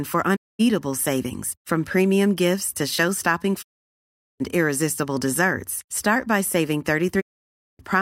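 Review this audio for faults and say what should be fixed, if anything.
Digital broadcast dropouts occur at 0.35 to 0.61 s, 3.61 to 4.42 s and 7.20 to 7.81 s. Each time, the speech fades out over about 20 ms and stays silent until the receiver decodes valid frames again. The sound sent during each gap is lost, with losses of roughly 224, 768 and 576 ms. Those lengths suggest about 7, 24 and 18 rejected frames. Improving reception, through better antenna placement, signal strength or error protection, would prevent these mutes.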